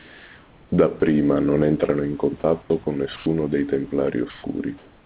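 From 0 to 0.72 s the room background, sitting about 29 dB below the loudest speech, gives way to a steady, featureless hiss about 2 dB quieter than the real background. This is comfort noise in place of the background, and the likely cause is discontinuous transmission. The sender stopped transmitting during the pause, and the receiver synthesised noise matched only roughly to the room's level and spectrum. The band-limited sound throughout, with nothing above 4 kHz, fits a G.711 A-law call path.

Five short gaps then interrupt the speech itself, each filled with the same flat noise: 1.00 to 1.02 s, 2.40 to 2.44 s, 2.62 to 2.70 s, 3.16 to 3.26 s, and 4.30 to 4.44 s. The amount of actual speech lost grows from about 20 ms in the first two to 30 ms at 2.62 s and 60 ms in the last two. This is sound dropped by the voice detector. The likely cause is the sender's detector mistaking part of the speech for background and cutting transmission until it triggered again.

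From 4.78 s to the end, comfort noise in place of the background returns. Here it matches the real level, so the change is heard as a loss of texture rather than loudness, with the background about 31 dB below the loudest speech.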